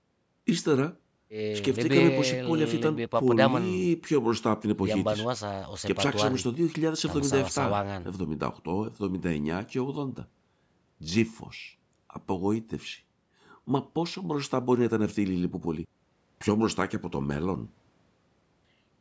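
There are no technical faults to describe in time order in this speech; the call microphone processing has taken out the lowest bass, as it normally does, and nothing above 8 kHz remains.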